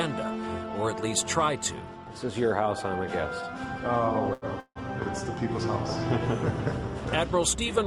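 At 4.33 s the sound holds unnaturally for about 84 ms until 4.45 s, with a faint buzzy sustain. This is a short stall from a late packet: the jitter buffer ran dry, the last sound was stretched, and playback resumed without loss, about 84 ms later.

From 4.60 to 4.79 s the audio stops again. A decaying buzz fills 157 ms, and its final 50 ms falls silent before the audio resumes intact. This call audio freeze likely comes from packets held up in transit emptying the jitter buffer, adding 157 ms of delay.

From 6.09 s to the end, a train of clicks ticks over the sound at roughly 6.6 per second, unevenly spaced. The clicks are similar in shape and peak a few dB above the audio. The likely cause is interference or a faulty connection or power supply injecting repeated pulses.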